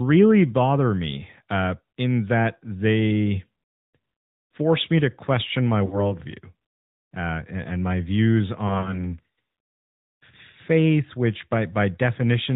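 Throughout this speech recording the sound is muffled and plainly buzzy and synthetic, with nothing above 4 kHz. These are the marks of the AMR narrowband mobile codec, here running at 10.2 kbps, where a pulse-driven vocal tract model rebuilds the voice from few bits. Just after "me to question my", from 5.86 to 6.11 s, the sound smears, sags and then returns weak. This fits about 60 ms of lost AMR speech frames, three 20 ms frames concealed by repeating the last good settings at falling gain. After "and my views", from 8.68 to 9.07 s, brief separate dips and warbles are scattered across about 160 ms. Each is a single lost frame of no more than 20 ms, with 60 ms lost in all.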